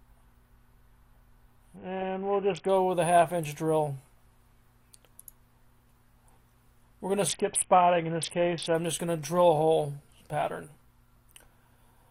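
Twice the Bluetooth link appears to have come under pressure, and the encoder cut its SBC bit pool to keep the stream going: a Bluetooth SBC bit pool drop from 1.76 to 2.69 s and again from 7.27 to 8.75 s. The sound fits a fall from a bit pool of 31 to 5, roughly 50 kbps. Starved of bits, the upper sub-bands vanish and the rest turn coarse, so the treble goes dull and a gritty noise rises until the rate returns.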